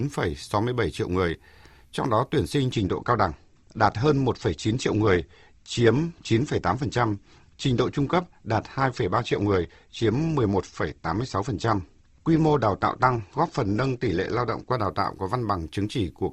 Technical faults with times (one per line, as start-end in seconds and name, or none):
2.72-14.72 adaptive stream at a lower bitrate